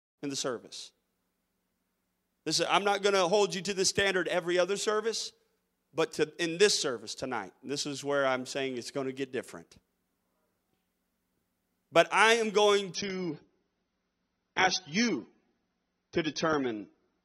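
A speech recording that opens with a gentle fade-in over the first 0.2 s. At 12.95 s, adaptive stream switches to a lower bitrate. Treble vanishes above 6.3 kHz and codec artefacts thicken, which fits a drop to about 24 kbit/s. The change is abrupt, with no gap, and lasts to the end.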